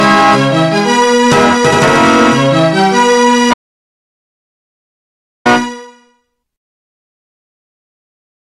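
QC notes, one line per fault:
3.54–5.46 s, audio dropout to silence: the input signal was lost for about 1.92 s, likely through a disconnected source or a broken link upstream of the recorder, which kept writing silence instead of stopping. The sound cuts off abruptly mid-flow and resumes just as suddenly. The gap is silent, with no room tone or noise floor carrying through, and whatever occurred during that stretch is unrecoverable.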